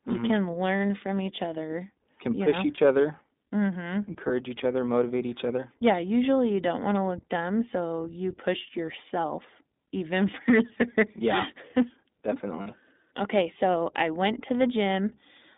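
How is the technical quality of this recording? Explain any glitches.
The recording is narrowband and coded, with four brief dropouts. It is limited by a phone-style codec throughout.

iLBC codec: The audio is confined to about 200 Hz to 3.7 kHz. Each 20 ms frame is coded independently, which fits iLBC's 15.2 kbps mode. The coding damage is plainly audible. The speech sounds rough, slightly synthetic and muffled.

Lost iLBC frames: The dropouts fall at 2.76–2.80 s, just after "push know", and at 4.28–4.31 s, just before "each other motivate each". Another falls at 8.86–8.89 s, after "dumb so you push", and the last at 12.62–12.68 s. The first three fit one lost 20 ms frame each, and the last fits two. The decoder covered each gap by repeating the last pitch cycle with added noise. Each sounds like a short, buzzy held vowel before clean recovery.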